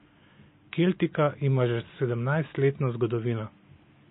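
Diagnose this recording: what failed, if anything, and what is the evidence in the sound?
The codec stage has failed, with MP3 compression the likely cause. Throughout the speech, the sound is heavily watery and swirly. S sounds chirp metallically. Weak frequency lines are dropping in and out between frames, which fits a starved bitrate near 24 kbps. The room noise sits about 42 dB below the speech.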